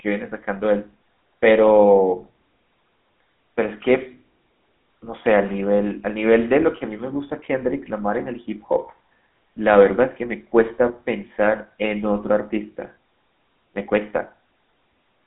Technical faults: GSM full-rate codec

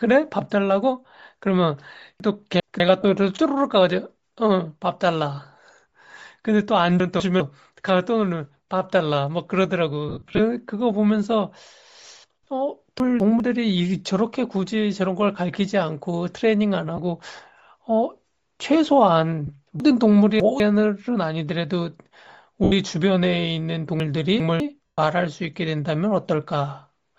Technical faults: Bluetooth LC3 compression; chunks out of order; lost LE Audio frames

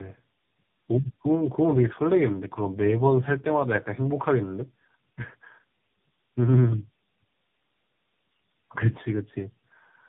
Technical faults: tandem speech coding

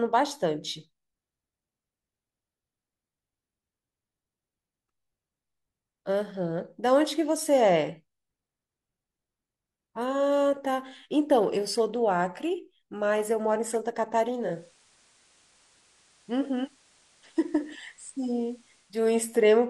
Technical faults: digital radio blending to analogue

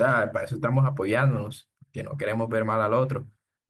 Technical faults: none

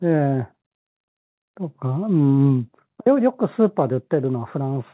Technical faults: none

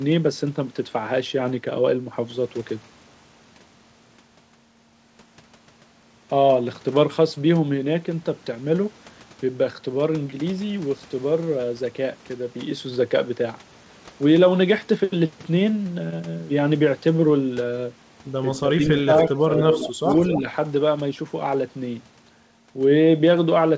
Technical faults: echo leak; speech suppressed in double talk

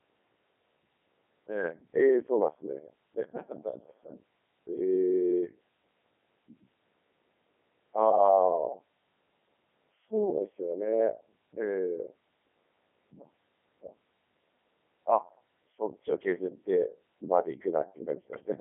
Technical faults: Codec 2 vocoder

